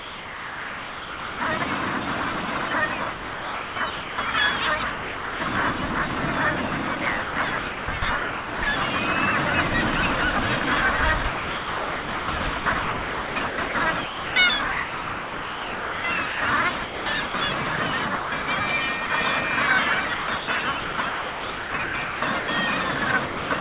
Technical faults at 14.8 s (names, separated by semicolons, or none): sound chopped by the voice detector